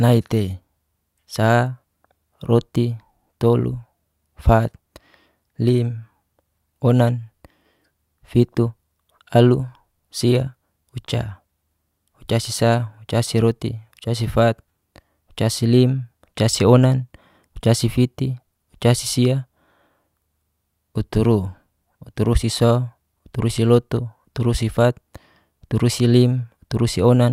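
No technical faults can be heard anywhere in the speech recording; the signal stays continuous and intact from its opening moment to its final one.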